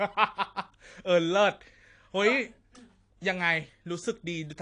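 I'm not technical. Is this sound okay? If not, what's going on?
No. AAC compression damage runs through the whole speech clip. The voice sounds dull and smeared, with a fizzy, warbling edge on hissy sounds like s. That's likely from squeezing the audio too hard, so the encoder drops the high end and leaves gaps or fills them with noise.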